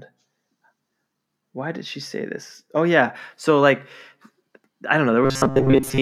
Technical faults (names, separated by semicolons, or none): robotic sound from repeated short buffers